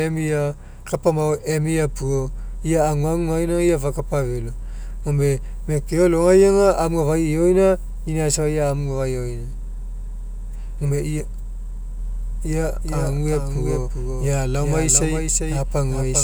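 From 11.99 s to the end, a doubled audio track kicks in: an abrupt, dry second copy trails roughly 0.4 s behind, a few dB quieter, likely from a second, slower capture path.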